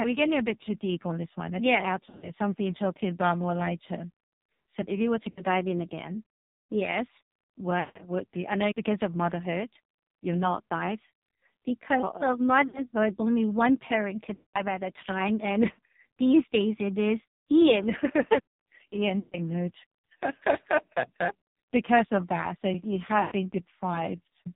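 AMR narrowband mobile codec runs through the whole speech clip: the 8 kHz sampling leaves nothing above 4 kHz. The very lean pulse excitation of the vocal-tract model makes the voice heavily buzzy and synthetic, which fits a bitrate near 5.9 kbps.

Lost AMR speech frames come at 2.06–2.32, 5.30–5.41, 7.80–8.04, 12.68–12.84, 14.34–14.62, 19.20–19.38 and 23.22–23.34 s. Failed frames force the decoder to repeat the last pitch and vocal-tract settings at falling gain. Short gaps give brief warbling dips. The longer runs, 160 ms at 7.8 s and 200 ms at 14.3 s, stretch the sound and fade it toward silence before it returns rough.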